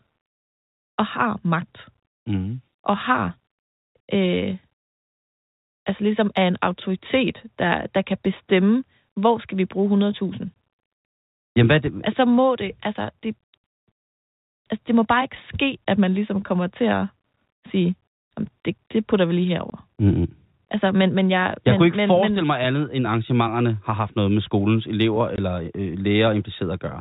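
Packet loss filled with silence shows up three times: at 10.55 s, at 19.7 s after "det putter vi lige", and at 25.36 s after "noget med skolens elever". Each is a 20 ms hole, which fits one lost packet, and the receiver played nothing in its place. You hear a brief dropout with hard edges in the narrowband G.711 telephone sound.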